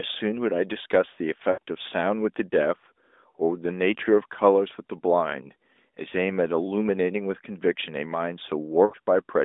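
Lost AMR speech frames occur at 1.52 to 1.59 s and again at 8.86 to 8.94 s, each gap about 60 ms, which fits three consecutive 20 ms frames failing their checks. The decoder bridges each gap by repeating the last good pitch and vocal tract settings while lowering the gain, so the sound smears and sags toward silence before recovering, briefly weak or rough. Around them, the narrowband line band of 250 Hz to 3.7 kHz carries light codec colouring.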